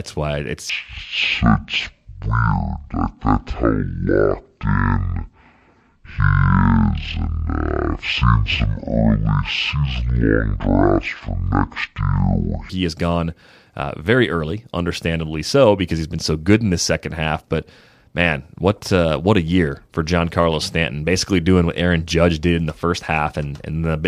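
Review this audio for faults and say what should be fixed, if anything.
From 0.70 to 12.70 s the speech plays at half speed and an octave low: stereo read as mono, with interleaved left and right samples treated as one channel. Prevent it by reading the file's channel count and de-interleaving stereo before any mono conversion.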